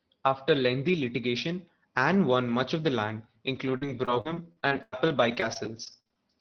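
Right after "much of the land", from 3.55 to 6.19 s, there's repeated packet loss (robotic sound): around fifteen short holes, the longest 96 ms, each patched by stretching the previous sound, so roughly a sixth of that span turns choppy over the Opus call audio, which tops out near 6 kHz.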